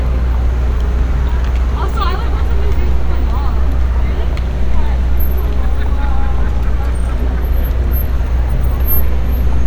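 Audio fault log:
No faults heard.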